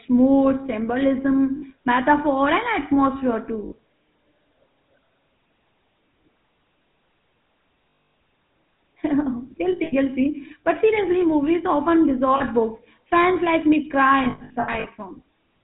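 Throughout, the speech runs through the GSM full-rate codec at 13 kbps, which models the vocal tract and excites it with a thinned, regularly spaced pulse train while discarding everything above 4 kHz. The result is a plainly audible buzzy, gravelly roughness over a dull, band-limited sound.

Lost GSM frames are concealed by repeating the last good frame's settings at a decaying level. This leaves a rough, metallic ring where sound should be. Short gaps of about 60 ms occur at 1.56–1.63 s and 3.66–3.73 s. A 240 ms loss at 7.9–8.14 s rings. At 9.72–9.94 s, 160 ms of losses are scattered in runs up to around 70 ms. A 40 ms loss follows at 12.36–12.42 s. Finally, 360 ms of losses are spread across 14.24–14.87 s in runs up to about a tenth of a second.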